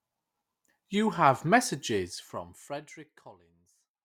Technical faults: none

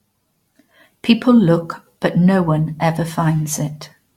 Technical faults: generation loss

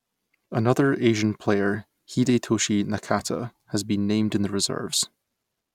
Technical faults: block of digital silence

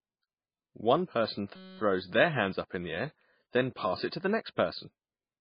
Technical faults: MP3 compression; system hang loop

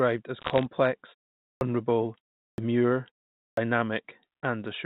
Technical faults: bit errors on a digital phone line; clipped start after a pause

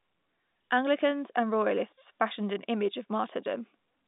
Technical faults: none

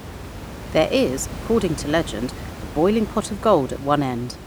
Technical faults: none

